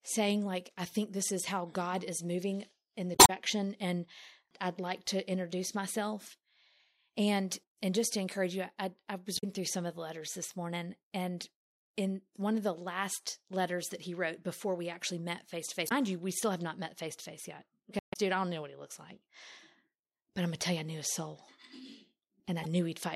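Damaged data in the compressed stream causes brief glitches at 3.12–3.30 s, 9.34–9.44 s, 15.85–15.92 s, 17.99–18.16 s and 22.63–22.66 s. The decoder loses sync.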